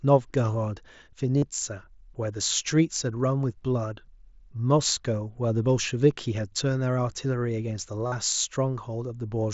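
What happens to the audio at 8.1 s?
From 8.07 to 8.12 s, concealed Bluetooth headset packet loss fills about 52 ms of lost audio (fitting seven lost frames) by repeating a matching stretch of the preceding waveform. It sounds like a brief steady buzz. The waveform shows identical repeated cycles, and the spectrogram shows flat horizontal bands.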